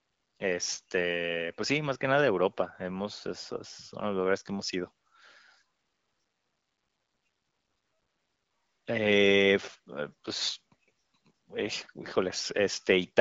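No technical faults can be heard in the speech; it has passed through an AMR wideband (HD Voice) codec at 12.65 kbit/s, which leaves only light coding traces and a band limit with nothing above about 7.7 kHz.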